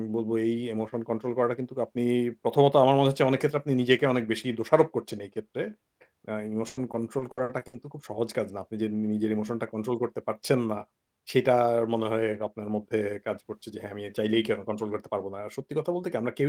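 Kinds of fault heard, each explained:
Repeated packet loss (robotic sound): from 6.67 to 7.75 s the speech breaks up into a run of seven short holes, the longest about 100 ms, each bridged by stretching the sound just before it. Roughly a third of that stretch is patched rather than real, so it turns choppy. Unlike a single dropout or a steady codec warble, the damage comes as rapid, repeated stutters confined to one stretch of about a second.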